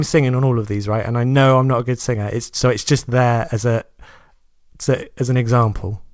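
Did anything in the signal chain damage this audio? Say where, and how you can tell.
Yes. Clock drift between sender and receiver, throughout: the sender's clock runs roughly 4 percent fast, so the receiver's jitter buffer keeps overfilling and must shed audio.

Repeated timing corrections, 0.20 to 6.05 s: the buffer keeps cutting short pieces, so the speech runs at about 104 percent speed with slight, unevenly spaced hiccups.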